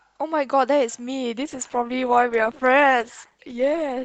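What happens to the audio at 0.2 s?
Nothing goes wrong at 0.2 s: the speech plays through that moment intact, with no dropout, click or distortion.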